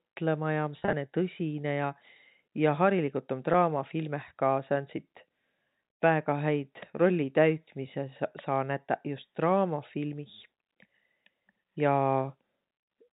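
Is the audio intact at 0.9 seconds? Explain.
No. From 0.79 to 0.93 s there is packet loss with pitch repetition: about 90 ms of audio went missing in short bursts across 140 ms, the longest run 30 ms, which fits nine 10 ms packets. The receiver filled each gap by repeating the last pitch period, so the sound briefly holds as a buzzy, stuck tone instead of dropping to silence, which is what sets it apart from a plain dropout. The telephone band of the G.711 coding stays unchanged through it.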